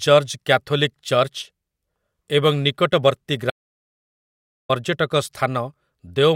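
At 3.50 s the speech cuts out into an audio dropout to silence lasting until 4.69 s, about 1.19 s of silence with no room tone, likely from a lost input. The waveform shows a flat line and the spectrogram a blank band.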